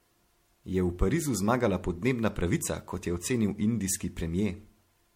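It's a speech clip with generation loss running all the way through: swirly, hollow and smeared, with blurred attacks and nothing above 16.4 kHz. The sound fits MP3 at around 64 kbit/s, likely re-encoded about five times, each pass piling up fresh artefacts.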